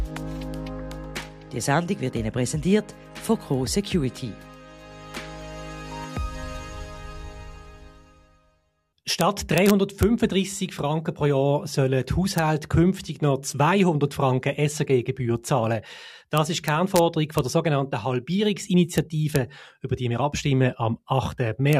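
Integer overflow cracks hit at 9.21, 9.58 to 10.03, 12.38, 16.38 to 16.99, 17.38, 18.98, 19.36 and 21.73 s. Peaks barely pass the integer limit, about 0 dB over. Instead of being limited, they wrap to the opposite sign. Each wrap makes a violent crack, harsher than clipping.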